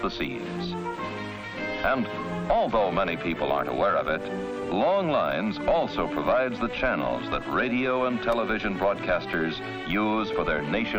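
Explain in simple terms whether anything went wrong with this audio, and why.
Something did go wrong, near the end. From 8.32 s to 10.34 s there are periodic USB or driver dropouts. Once a second, the sound briefly cuts to silence for a couple of milliseconds. It is heard as a few regular ticks, caused by a background task stalling the audio connection.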